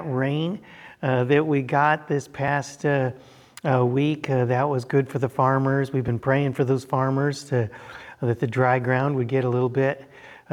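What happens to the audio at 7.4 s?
Nothing goes wrong at 7.4 s; the audio passes through that moment intact, with no dropout, click or other fault.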